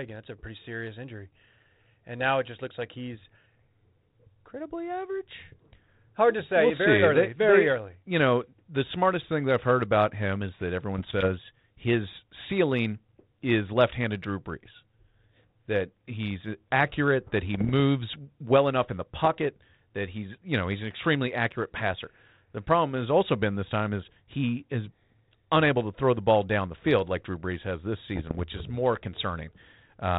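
Short pops and rough, gritty bursts with brief jumps in level break in at 10.98 to 11.27 s, between "about him is that" and "his ceiling is"; at 17.54 to 17.71 s; at 19.25 to 19.38 s, between "well enough in the" and "that he's you know"; and at 28.16 to 28.43 s, between "has this" and "is more". These are bit errors on an ADPCM link. Well under one percent of the bits arrive flipped, and each wrong bit throws off the decoder's step size and predictor, so the damage rings on for some milliseconds instead of staying a single click. The link itself is G.726 ADPCM, whose band-limited sound fits a 32 kbit/s setting.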